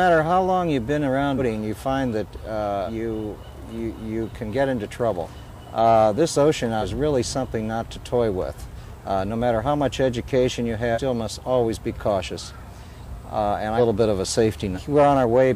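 Compressed frames are skipped eight times, at 1.37, 2.86, 5.23, 6.81, 8.76, 10.94, 13.77 and 14.75 s. Whole frames never reach the output. The sound jumps forward each time. Most jumps lose a fraction of a second. The last two are longer, about half a second and then nearly three quarters. The step sizes fit a frame of about 46 ms.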